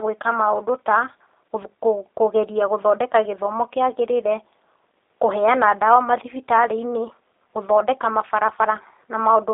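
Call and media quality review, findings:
G.729 codec damage, throughout the speech. Band limited to 300 Hz to 3.7 kHz, nothing above 3.8 kHz. Speech rough and slightly synthetic, plainly audible. It is rebuilt from a tract filter, a pitch predictor and sparse pulses. Fits an 8 kbit/s G.729A path.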